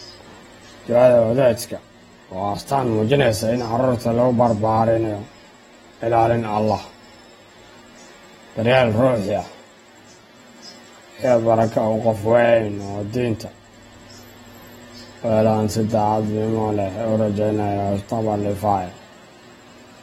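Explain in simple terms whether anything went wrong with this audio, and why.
Something did go wrong, and it lasts the whole recording: the speech has the dull, smeared sound of AAC compression. Nothing comes through above about 16.6 kHz, so the crisp top end is gone, and the damage is plain to hear, with a warbly, fizzy edge on hissy sounds. The likely cause is the file being squeezed hard to save space, which throws away detail the encoder guessed you wouldn't miss.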